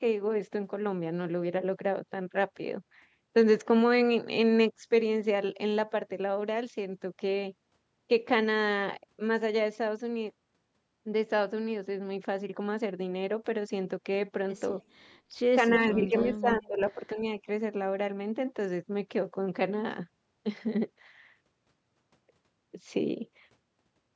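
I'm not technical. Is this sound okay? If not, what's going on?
No. Between 15.68 and 17.18 seconds the voice dips and partly drops out, in pieces adding up to about a second. At its worst it gets much quieter. The likely cause is speech suppressed in double talk. Both people were talking at once. The call's echo-removal system couldn't tell this voice apart from sound coming out of a loudspeaker. So it turned everything down together.

There is also an echo leak. From 15.86 to 16.37 seconds a faint copy of the voice comes back, 258 milliseconds late. A much fainter scrap repeats at 17.1 seconds, with the same delay. This likely happened because someone was on a loudspeaker. Their microphone picked up the voice, and their echo removal didn't catch all of it. The leftover was sent back down the line.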